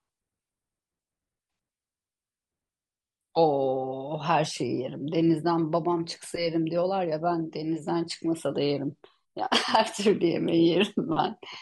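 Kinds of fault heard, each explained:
No technical faults can be heard in the speech signal: its level, continuity and frequency range hold steady throughout.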